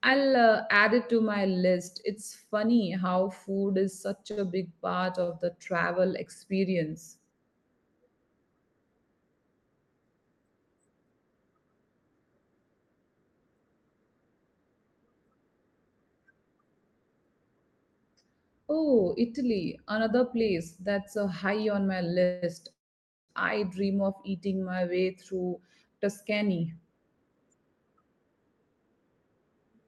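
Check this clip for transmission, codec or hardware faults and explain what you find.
There are three kinds of transmission fault here: two short stalls, a pair of freezes, and a stretch of sped-up speech. The call path sounds like a call codec, with the top end topping out around 12 kHz, which fits Opus at a modest bitrate.

Short stall from a late packet, at 4.31–4.39 s and 5.24–5.30 s: a packet arrived late, so the receiver held the last sound for about 57 ms and then 46 ms. You hear a brief drawn-out smear, with nothing lost.

Call audio freeze, at 22.24–22.44 s and 22.72–23.31 s: the speech hangs for 184 ms, then for 565 ms, and the second one drops to silence for about 550 ms. The likely cause is delayed packets draining the jitter buffer. The audio then resumes exactly where it stopped.

Jitter buffer speed-up, from 24.89 to 28.90 s: to work off the built-up delay, the receiver trimmed tiny pitch-period slices, taking out around 0.4 s in total. 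The speech runs about 11% fast at unchanged pitch and sounds noticeably hurried.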